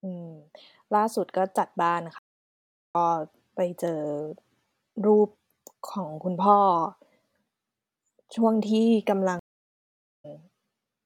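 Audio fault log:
2.18–2.95 s and 9.39–10.25 s, stream reconnect: the connection dropped, leaving about 0.75 s and 0.85 s of silence. A fresh decoder restarted mid-stream, so speech resumes roughly 0.5 s and 0.4 s further on, fading in. Waveforms show flat-line gaps; spectrograms show full-band blank columns.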